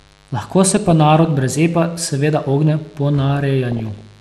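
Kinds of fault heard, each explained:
Mains buzz: A steady, raspy buzz sits under the speech for the whole clip, roughly 35 dB below it. Its harmonics build on a 50 Hz mains fundamental, which fits spiky interference from a dimmer, rectifier or poorly shielded cable coupling into the signal path.
MP2 compression: The speech sounds dull and carries a gurgling, granular grain throughout, with upper bands flickering in and out. This is likely from MPEG Layer II coding at a low rate, around 80 kbps, where starved sub-bands are switched off or coarsely quantised.
DAB burbling: Short blips of noise break over the speech from 0.65 to 1.25 s, just before "brez epa seveda ogne", and again from 3.72 to 4.01 s. Corrupted data from weak reception slipped past error correction, putting noise blips into single sub-bands.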